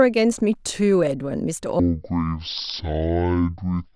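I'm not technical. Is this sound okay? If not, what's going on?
No. From about 1.80 s to the end at 3.95 s, the speech suddenly turns slow and deep, dragging at half speed and dropping a full octave (12 semitones) lower. This is a wrong sample rate fault: the audio is being played back at half the rate it was recorded at, with no conversion, which fits a 44.1 kHz recording played at about 22 kHz. Speed and pitch fall together.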